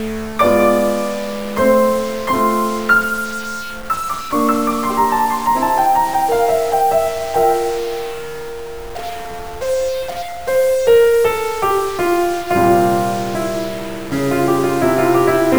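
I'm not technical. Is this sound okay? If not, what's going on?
No. The music has a stuck bit from start to finish, most likely from a broken connection or a faulty converter. The audio is stored as numbers, and one digit in those numbers seems frozen at the same value instead of changing as it should. About half the values come out wrong, which gives the music a harsh, buzzy edge, and quieter moments fill with a noticeable hiss, because the frozen digit is a fairly significant one.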